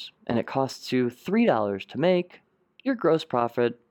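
No technical faults are audible.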